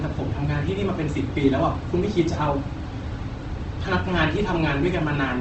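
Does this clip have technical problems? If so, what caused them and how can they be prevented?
Yes. Throughout the speech, the sound is grainy and rough, with voiced parts turning noisy rather than swirly, and nothing is present above about 8.2 kHz. This is likely Opus compression in its music mode at a low bitrate, which fits roughly 16 kbps. The encoder preserves each band's energy but fills starved bands with noise or folded copies of lower bands. On a spectrogram, this shows as a flat ceiling at 8.2 kHz with harmonics smeared into fuzzy texture instead of leaving gaps. To prevent it, encode at a higher bitrate or send the recording through a lossless path.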